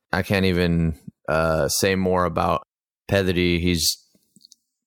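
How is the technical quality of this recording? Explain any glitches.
The recording shows no technical glitches, with the signal continuous and intact throughout.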